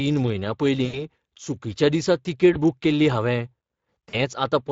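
Speex codec damage runs through the whole speech recording, plainly audible as a hoarse, noisy texture from a CELP coder that has too few bits for the excitation, pointing to roughly 20 kbps. VoIP packet loss concealed by the speech codec occurs at 0.85–1.00 s just before "चुकिच्या दिसा", at 2.53–2.57 s between "चुकिच्या दिसा" and "बूक केल्ली", and at 4.09–4.16 s. About 80, 20 and 40 ms of audio are missing, and the decoder stretches the last pitch into a fading fill.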